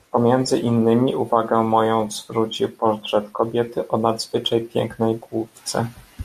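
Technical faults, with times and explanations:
5.78 s, damaged data in a compressed stream: a brief blip breaks into the speech where a stretch of the compressed bitstream was corrupted. The decoder misreads the bad frame, loses sync and hunts for the next valid frame header, emitting garbled output meanwhile. On a spectrogram it shows as a thin vertical smear of broadband or oddly tonal energy unrelated to the surrounding harmonics; on the waveform, a sudden short spiky or discontinuous patch.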